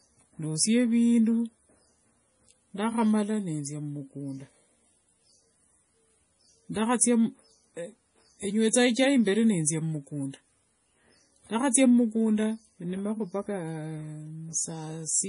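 Heavy MP3 compression is the likely cause, running throughout: starved of bits, the encoder discarded everything above 10.6 kHz and let weak frequency lines flicker between frames, which fits a rate around 32 kbps. The speech sounds dull, watery and swirly, with smeared attacks.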